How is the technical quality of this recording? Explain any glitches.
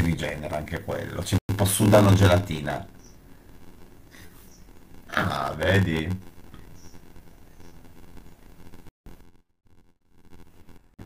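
The recording has two faults: a steady buzz with slowed delivery running through the whole speech clip, and three brief dropouts near the start and end.

Block size mismatch (padded), throughout: one stage delivers shorter blocks than the next reads, and the missing part of each is filled with zeros. A tiny gap recurs at about 86.1 Hz, which fits a 512-sample read block. That gap is heard as a buzz, and the speech runs at 0.861 times normal speed.

Bluetooth stall, at 1.38 to 1.52 s, 8.89 to 9.11 s and 10.94 to 11.01 s: the sound cuts to silence for 94 ms, 152 ms and 42 ms, then resumes. This is likely interference delaying wireless packets, so the headphone buffer emptied until the resent packets arrived.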